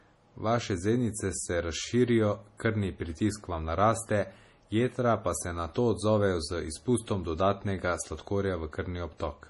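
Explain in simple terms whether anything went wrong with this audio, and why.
MP3 compression runs throughout. The speech sounds heavily watery, with nothing above 11.5 kHz, likely because the encoder, short of bits, discarded the treble and faint detail.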